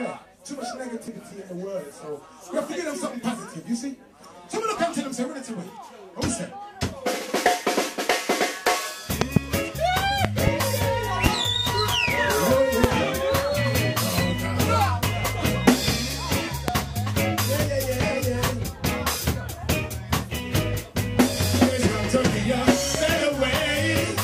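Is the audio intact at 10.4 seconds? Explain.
No. Between 10.25 and 10.50 s a loud pop occurs: two sharp pops in quick succession, standing out by roughly 20 dB above the surrounding sound. A sudden voltage step or pulse, likely from a plug, a switch, static or a driver glitch, was added to the signal and shaped by the circuits that followed. Unlike a dropout, the underlying sound carries on beneath the pops rather than breaking off.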